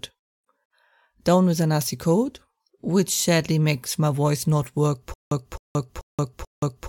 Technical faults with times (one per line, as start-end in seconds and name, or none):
5.14-6.88 stutter with silent gaps